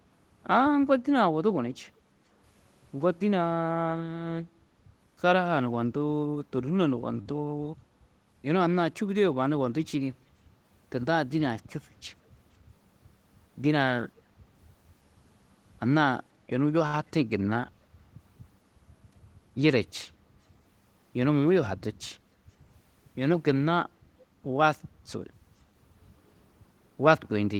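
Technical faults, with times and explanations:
1.98–2.24 s, background gated by the echo canceller: the room sound dips by about 8 dB for roughly a third of a second, then comes back. While the far end's audio played through the loudspeaker, the echo canceller turned the microphone down hard, and it released once that playback stopped.
7.21 s and 16.87–16.96 s, short stall from a late packet: the sound briefly hangs, held for 40 ms and then 67 ms, with a slight buzzy smear. Each time a packet arrived late and the jitter buffer ran dry. The receiver stretched the last audio, then resumed with nothing lost, adding that much delay.
14.16–14.21 s, echo leak: a very faint scrap of sound appears for about 50 ms, trailing the original by 480 ms at roughly 35 dB below it. This is likely a loudspeaker echo that the far side's canceller failed to fully remove and sent back.
18.96–19.51 s, jitter buffer speed-up: for about half a second the audio runs at 110% speed with unchanged pitch and sounds slightly hurried. 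The buffer held more audio than its target, so the receiver cut many short pitch-period pieces, a little under a tenth of a second in total.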